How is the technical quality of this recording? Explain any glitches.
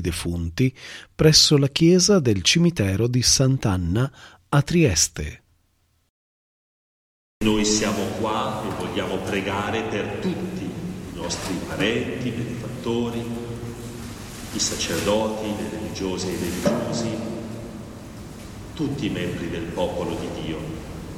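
The technical quality of the recording is sound, with no glitches to explain.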